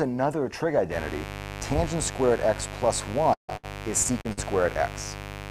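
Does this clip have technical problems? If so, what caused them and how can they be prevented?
Yes. Four kinds of fault are audible.

Mains buzz runs from 0.89 s to the end. It is a steady, raspy 50 Hz buzz, fairly loud and not far below the wanted sound. A dimmer, rectifier or unshielded cable is letting sharp switching spikes into the signal twice per mains cycle, which produces a dense ladder of harmonics. On a spectrogram this appears as evenly spaced horizontal lines at multiples of 50 Hz, reaching well into the kHz range. The waveform shows a repeating spiky pattern every 10 ms. Keep dimmers and power supplies away from the audio path, and use shielded, properly grounded cabling.

A long network dropout, likely caused by a stall in delivery, spans 3.33 to 3.50 s. About 0.16 s of audio never arrived. The receiver extended the last sound as it faded for roughly 0.15 s, leaving about 0.12 s of near silence before the audio resumed further on. 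On a waveform the amplitude tapers into a flat gap. On a spectrogram the smear fades to a dark band. A steadier connection or a larger jitter buffer would prevent it.

Bursts of packet loss occur at 3.57 to 3.65 s and 4.33 to 4.39 s, each losing about 40 to 60 ms. In both, the receiver held the preceding sound, about 66 ms and 47 ms respectively, and turned it down before the audio jumped ahead. The result is a brief held sound that fades. On a spectrogram it looks like a frozen, smeared patch that decays. On a waveform it looks like a repetitive, shrinking stretch. Forward error correction or a less congested network path would reduce these.

Short concealed packet loss occurs at 4.03 to 4.12 s and 4.21 to 4.27 s, losing about 20 ms and 40 ms. The decoder filled each hole by continuing the last sound for about 13 ms and 32 ms, then blended back in, and the first gap came out a few milliseconds longer than the original. 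Each one is heard as a small smear or wobble. On a spectrogram each shows a brief blurred patch. On a waveform each shows a short, slightly repetitive section. Better network quality or in-band redundancy would prevent them.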